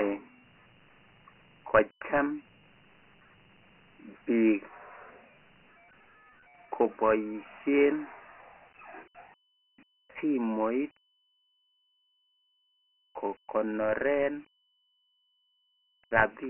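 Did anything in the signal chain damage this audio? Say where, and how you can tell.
Yes, at the codec stage, and it's there the whole way through: classic Dialogic VOX ADPCM. Nothing survives above 3 kHz, which points to 6,000 samples a second at 4 bits, so about 24 kbps, and the coarse steps leave a heavy, gritty hiss riding along with the speech.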